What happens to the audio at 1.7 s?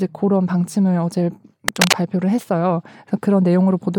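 Cable scratch noise runs from 1.68 to 1.95 s, a burst of dense, ragged crackle and rustle lying over the speech for a little over a quarter of a second. The likely cause is a worn cable or connector being shifted, so that its contact resistance flickers rapidly and injects irregular noise into the signal. The scratching sits at roughly the same level as the speech, so it intrudes clearly rather than hiding underneath it.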